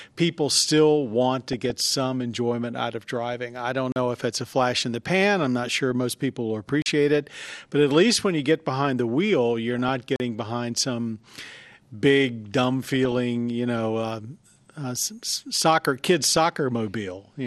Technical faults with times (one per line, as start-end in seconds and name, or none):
0.00-17.47 MP2 compression
1.53-1.70 DAB burbling
3.92-3.96 block of digital silence
5.64-5.91 DAB burbling
6.82-6.86 block of digital silence
9.64-9.89 DAB burbling
10.16-10.20 block of digital silence
12.83-13.18 DAB burbling
16.23-16.37 DAB burbling